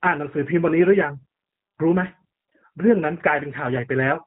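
From start to finish the speech has been through the G.729 codec, and it's plainly audible. Everything above 4 kHz is gone, and the voice is rebuilt from a filter, pitch predictor and a few pulses, so it sounds rough and synthetic, which fits an 8 kbit/s stream.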